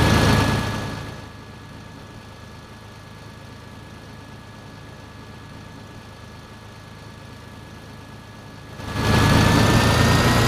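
Zipper noise shows up from 8.70 to 9.13 s: a level change of around 25 dB arrives in unsmoothed 5 dB steps, roughly ten a second, each one ticking audibly.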